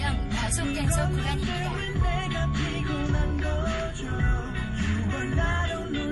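From start to finish the sound carries plainly audible coding damage, likely from MP3 compression. Nothing reaches above 11.5 kHz, a hard ceiling where the encoder dropped the top band to save bits. Below that, weak spectral lines drop in and out between frames, giving a watery, swirling texture, and transients lose their edge and smear. The degree of damage points to a low bitrate, in the region of 48 kbps.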